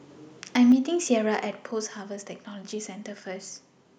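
At 0.70 to 0.72 s, microphone overload, likely from the input volume being set too high, drives peaks about 2 dB past the converter's limit, flattening roughly a fifth of samples into a brief harsh crackle. At 0.72 s, the microphone volume is stepped down, likely by the call software reacting to that clipping, so the speech and background drop suddenly by about 4 dB.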